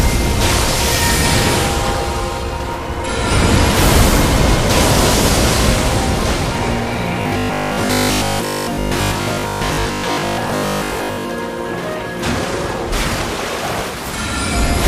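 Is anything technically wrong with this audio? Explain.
Yes. From 7.22 to 11.34 s there is robotic sound from repeated short buffers. Audio likely arrived too seldom, so playback looped the last 20 ms chunk for most of that span, skipping real audio. The loop imposes a rigid 50 Hz metallic buzz that only loosely follows the underlying sound.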